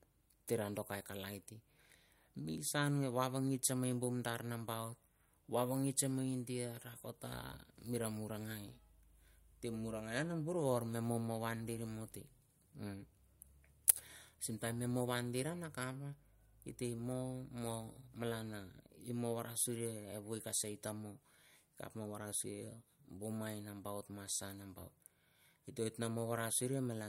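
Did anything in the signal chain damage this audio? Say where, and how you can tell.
No, nothing in the signal chain has damaged this speech recording. Listening across the whole clip, no stage between capture and playback leaves any audible mark on the sound.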